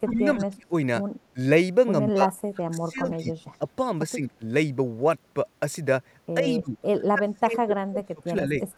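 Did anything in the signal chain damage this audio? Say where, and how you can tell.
Yes, the damage comes from call processing, specifically the echo canceller. The speech is pulled down during six spans: 0.03–0.73 s, 1.33–1.37 s, 2.13–3.65 s, 4.14–4.42 s, 6.41–6.78 s and 7.12–8.56 s. The deepest dips run from about 10 dB up to about 30 dB in the final span. This is speech suppressed in double talk, likely triggered when the far side spoke at the same time. Unable to separate the local talker from loudspeaker echo, the canceller attenuated everything. On a waveform the envelope sags or notches in chunks. On a spectrogram the energy thins out across the band.

The same stage also lets echo through. Faint copies of the speech appear at 3.11–3.17 s and from 8.61 s to the end, trailing the original by 107 ms and sitting about 30 dB and about 40 dB below it. This is echo leak, likely residue the canceller failed to remove from a loudspeaker pickup and sent back. 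On a spectrogram it shows as a weak ghost of the preceding harmonic pattern, shifted about a tenth of a second later.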